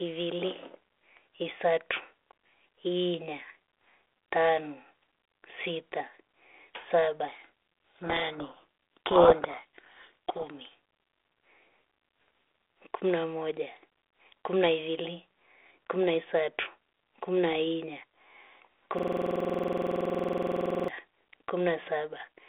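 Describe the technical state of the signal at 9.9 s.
At 9.9 s you're inside a codec payload misread running from 7.28 to 10.55 s. The G.726 code words arrive with their bits in the wrong order, so the decoder rebuilds the wrong differences and the speech sinks under harsh, grinding distortion until the packing lines up again.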